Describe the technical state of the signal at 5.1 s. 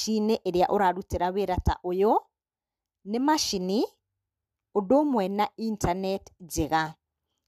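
Nothing at 5.1 s points to a fault; the audio is intact at that moment.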